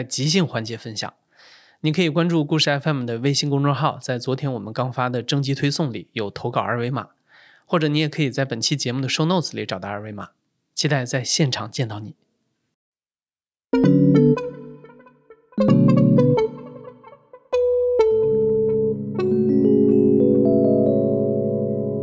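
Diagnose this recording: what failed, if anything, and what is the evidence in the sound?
Nothing failed in this recording, and the sound gives no evidence of any fault.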